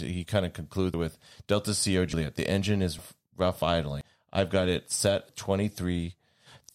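The capture side likely failed to read its buffers before the hardware overwrote them: a dropped buffer (overrun) at 0.94, 2.13, 2.99, 4.01 and 5.29 s. Each time roughly a tenth to 0.15 of a second vanishes without any gap, so the speech jumps ahead, as right after "kind of".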